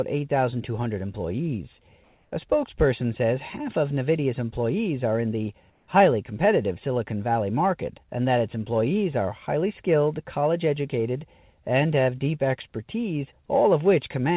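From 2.04 to 2.32 s, just before "spokesperson says half of", and again from 5.70 to 5.88 s, right after "employees are in the", the faint background, about 41 dB below the loudest speech, turns into a flat, textureless hiss, about 1 dB louder the first time and about 1 dB quieter the second. This is comfort noise in place of the background, likely from discontinuous transmission, with the receiver synthesising noise over pauses in this band-limited call audio.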